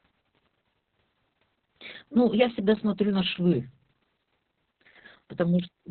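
A speech clip with Opus voice compression audible throughout its length. Nothing survives above about 4.3 kHz, giving a narrowband, telephone-like muffle. The speech is hoarse and faintly robotic, the mark of SILK linear prediction coding the excitation very coarsely. Damage this heavy points to a bitrate near 6 kbps, where the encoder narrows the band to 4 kHz. It was coded in long frames, around 60 ms.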